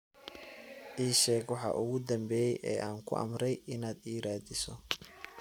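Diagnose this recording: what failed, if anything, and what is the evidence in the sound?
Nothing failed; no stage of the chain shows faults.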